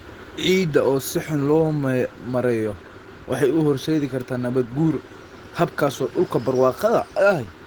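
Throughout, the speech sounds hoarse and faintly robotic. This is Opus voice compression at a rate that fits about 16 kbps, with hybrid coding roughly rendering the band up to 20.1 kHz.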